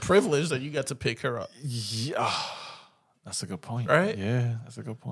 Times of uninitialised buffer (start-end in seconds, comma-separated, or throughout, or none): none